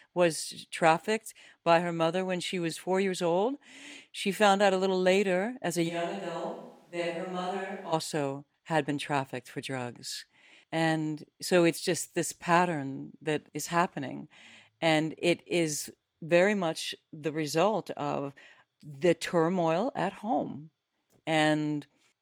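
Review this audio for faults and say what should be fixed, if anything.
From 5.90 to 7.91 s, right after "little later as a", the speech suddenly turns roomy and hollow, loses bass, drops about 10 dB and gains room noise: likely a switch to a distant microphone. Monitor the close microphone continuously and secure its connection so dropouts get caught.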